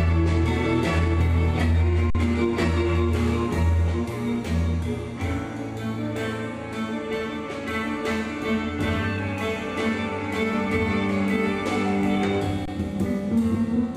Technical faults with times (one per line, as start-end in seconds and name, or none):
2.10-2.15 underrun with held sample
12.65-12.68 underrun with held sample